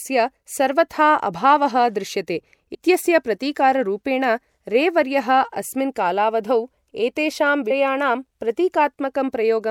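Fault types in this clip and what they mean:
Compressed frames skipped: The speech jumps forward with no silent gap. At 2.73 s, right after "सर्वथा अभावः दृश्यते", roughly 50 ms goes missing. At 7.70 s, after "कालावधौ एतेषां", roughly 150 ms is lost. Both losses fit whole frames of about 26 ms. Unlike a dropout, which leaves a hole of silence, or a hard edit with a sharp click, each join here is a short smeared blip, because the overlapping frames on either side blend into each other.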